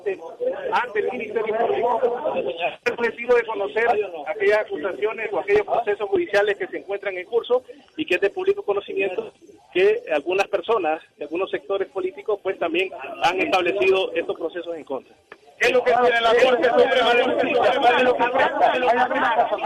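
From 16.36 s to the end, a doubled audio track: a second full-band copy trails about 0.7 s behind, roughly 5 dB quieter, likely from a slower capture path. The waveform shows every onset repeated, with an abrupt start.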